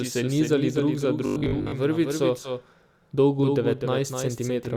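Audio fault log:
Throughout: doubled audio track. A second full-band copy of the speech trails the original by roughly 300 ms, sitting about 5 dB below it. It carries no decay and no room colour, so it reads as a clean, separate repeat, not an echo. A steady offset like this likely comes from the same signal being captured twice, once through a slower path. Every syllable lands twice, which blurs the timing.
1.26–1.72 s: robotic sound from repeated short buffers. Just after "se nizali drug za", the speech turns into a rigid, metallic buzz at 50 Hz. The cause is likely new audio arriving too seldom, with playback filling the gaps by repeating the last 20 ms over and over. About 70 percent of this stretch is repeated material, and the real audio behind it is lost. The loop length fixes the buzz pitch.
2.44–2.49 s: compressed frames skipped. The audio jumps forward by about 20 ms, which fits two missing 10 ms codec frames. 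Those frames were either absent from the stream or rejected by the decoder as damaged. A small piece of the speech simply vanishes at that point.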